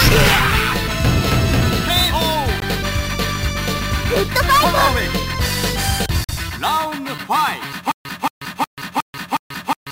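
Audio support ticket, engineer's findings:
Bluetooth stall, 2.60–2.64 s and 6.24–6.31 s: brief dropouts to silence, about 18 ms then 45 ms, playback resuming where it stopped. Likely radio interference delaying packets until the headphone buffer emptied, then retransmissions arriving and refilling it.

Stutter with silent gaps, 7.92 s to end: a 227 ms fragment repeats five times on a 363 ms cycle, each followed by 136 ms of digital silence. Player or stream likely stalled, replaying its last buffered fragment each retry; the intervening audio is lost.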